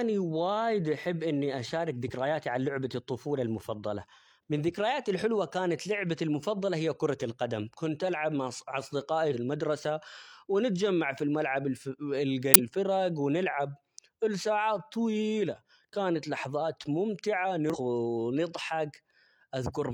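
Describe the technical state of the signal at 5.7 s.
Around 5.7 s the speech signal is intact, with no audible technical fault at that moment.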